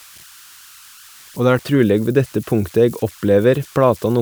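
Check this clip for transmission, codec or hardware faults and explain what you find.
One hardware fault runs through the whole recording: converter idle tones. They are present from start to finish beneath the speech. A delta-sigma converter working without dither settles into repeating bit patterns when its input is small. Those patterns produce tones, and here one sits somewhere around 1.5 kHz. It rises to about 27 dB below the speech. It is heard as a whistle in the pauses and a grainy texture under quieter passages.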